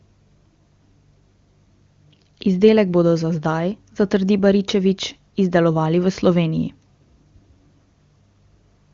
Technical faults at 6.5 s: none

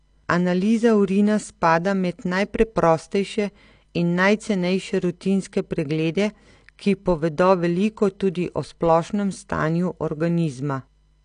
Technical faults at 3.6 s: AAC compression

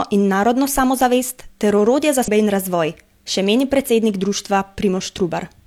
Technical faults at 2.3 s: damaged data in a compressed stream

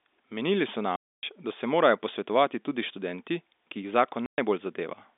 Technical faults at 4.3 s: packet loss filled with silence

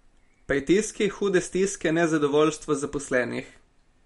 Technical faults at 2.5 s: MP3 compression

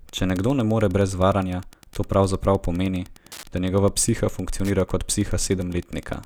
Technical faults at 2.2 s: Wi-Fi interference

